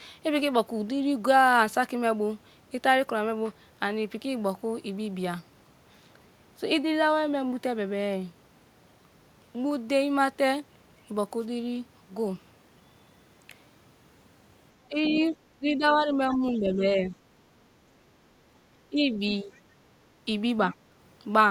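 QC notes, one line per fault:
14.88–15.19 s, 15.57–16.12 s, 16.28–17.05 s, 18.9–19.55 s and 20.7–20.75 s: speech suppressed in double talk. When both ends talk at once, the echo canceller likely fails to tell the near talker from the loudspeaker echo and turns both down together. The speech dips by roughly 10 to 15 dB in the longer runs and only slightly in the brief one near 20.7 s, so it sounds pushed back or partly cut away while the far side is speaking.
16.33–16.52 s and 19.54–19.6 s: other side's voice leaking through. The far side's voice plays from the talker's loudspeaker back into the microphone, and the echo canceller likely leaves some of it behind. It comes through as short, faint scraps, well below the speech and quieter still at 19.54 s. Both scraps overlap suppression runs, so they are heard while the near speech is being held down.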